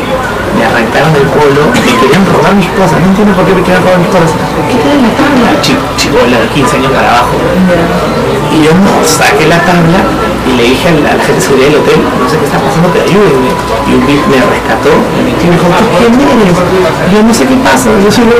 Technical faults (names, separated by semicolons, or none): hard clipping